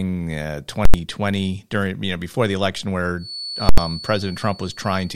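At 0.85 s, invalid numbers at full scale hit the output. A calculation produced infinite or invalid values that were clamped to the maximum level. The output holds there for about 85 ms, which fits a 4096-sample block. It lands as one sharp bang.

From 3.15 s to the end, a thin feedback whistle sits behind the speech at 4.4 kHz. It stays steady, somewhat quieter than the speech, and swells and fades slowly in level. The likely cause is a loudspeaker-to-microphone loop held just at the edge of feedback.

At 3.69 s, the same full-scale fault returns for another 85 ms block. It is again heard as a single loud bang, this time on top of the whistle.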